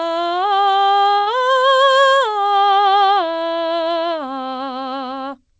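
At 1.18 s a late packet emptied the jitter buffer, a short stall from a late packet: the music is stretched for 88 ms, then resumes without loss.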